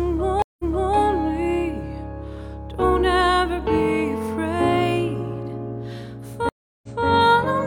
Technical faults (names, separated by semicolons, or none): stream reconnect